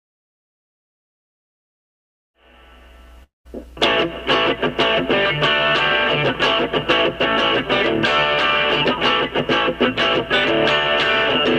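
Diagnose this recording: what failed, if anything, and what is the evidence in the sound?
Network stage: at 3.23 s the sound breaks off. The last fragment is stretched into a decaying buzz, then about 160 ms of near-silence follows until 3.47 s. Audio resumes with roughly 220 ms missing, most likely a long network dropout concealed by the receiver.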